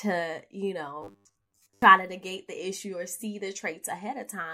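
From 1.02 to 1.82 s the speech turns into a rigid metallic buzz at 100 Hz. This is robotic sound from repeated short buffers, likely from a repeated 10 ms chunk filling most of the stretch. Spectrograms show flat harmonics every 100 Hz, and waveforms identical repeating cycles.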